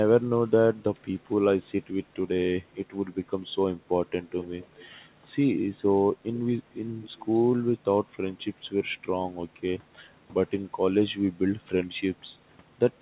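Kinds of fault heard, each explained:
Echo leak: a loudspeaker echo canceller likely let its pickup through, so a faint copy of the speech returns 213 ms late, twice, well below the speech.
Background gated by the echo canceller: the canceller clamped the microphone, so the room sound dips by about 15 dB for a brief moment near 10 s.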